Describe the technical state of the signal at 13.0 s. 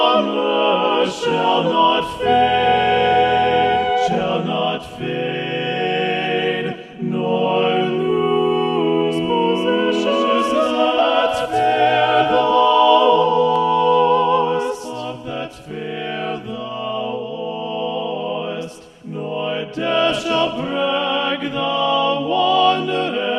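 A doubled audio track runs from 10.06 to 13.56 s: a second full-band copy of the sound trails about a fifth of a second behind, roughly 5 dB quieter, likely from a slower capture path. It has no decay or room colour and ends abruptly.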